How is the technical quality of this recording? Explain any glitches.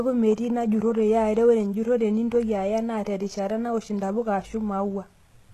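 Noticeably compressed throughout. The s sounds come out gritty and metallic, with nothing above 12.3 kHz, likely HE-AAC compression at a very low bitrate, around 16 kbps, copying lower bands upward to fake the treble.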